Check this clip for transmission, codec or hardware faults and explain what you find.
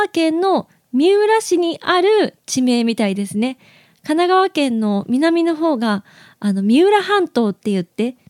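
Nothing stood out on listening to this speech clip.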